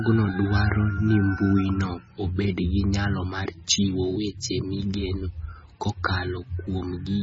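Speech throughout carries heavy MP3 compression damage, likely from encoding at a very low bitrate, which fits something near 17 or 18 kbps. Nothing remains above 7.6 kHz, and weak frequency components flicker in and out between frames, giving a watery, swirling texture with metallic chirps on s sounds and smeared consonant attacks. That flickering separates it from a simple low-pass filter, which would dull the top end but leave the remaining sound steady and clean.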